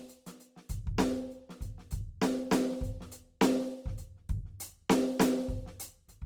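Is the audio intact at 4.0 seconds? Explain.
No. Opus compression runs through the whole clip, including 4.0 seconds, likely from a CELT-mode encode at a low bitrate near 24 kbps. Short of bits, the encoder keeps each band's energy but fills detail with folded or noise content, so the music sounds grainy and rough. Bandwidth stays full, to about 20.3 kHz.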